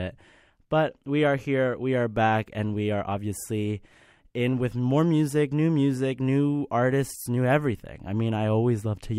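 No technical faults are audible.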